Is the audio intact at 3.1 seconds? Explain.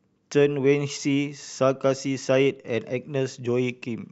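Yes, at 3.1 seconds the audio is intact, with no dropout, click, distortion or other fault at that moment.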